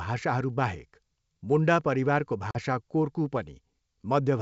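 At 2.51 s, just after "मुन्डा परिवारको", there is packet loss on the ADPCM call. About 40 ms of speech, a few packets' worth, drops to hard-edged silence. The decoder's predictor and step size lose track of the sender. Speech returns at 2.57 s with brief distortion, under G.722's faint upper-band hiss.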